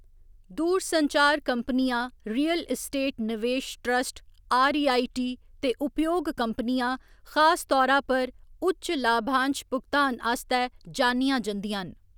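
No technical faults are audible.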